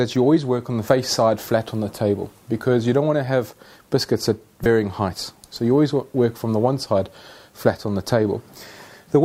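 At 0.88 s and again from 4.62 to 4.66 s, damaged data in the compressed stream produces a brief glitch heard as a chirp, squawk, click or short hole: the decoder misreads corrupted frames and loses sync while hunting for the next header.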